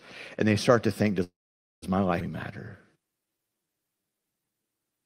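A call audio freeze runs from 1.23 to 1.84 s, just after "they start to think". After a brief fading continuation, about 0.5 s of silence follows. The likely cause is delayed packets starving the jitter buffer, and the audio resumes with nothing lost.

A skip ahead at 2.20 to 2.23 s drops roughly a fifth of a second of speech. A stretch of audio was dropped while later audio was already waiting, so the two sides are spliced almost directly.

A jitter buffer slow-down from 2.97 to 4.64 s stretches the speech to 86% speed at unchanged pitch. Repeated pitch periods add 246 ms to rebuild the buffer reserve.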